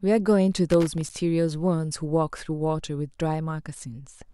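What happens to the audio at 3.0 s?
Nothing goes wrong at 3.0 s; the speech passes through that moment intact, with no dropout, click or other fault.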